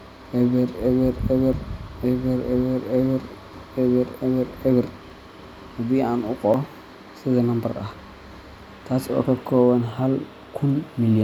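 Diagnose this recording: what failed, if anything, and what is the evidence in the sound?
Capture buffers were likely collected too late and overwritten, a dropped buffer (overrun), so the speech skips ahead at 1.53, 5.10, 6.54 and 9.89 s, after "oo ka kooban", each losing about 10 to 30 ms.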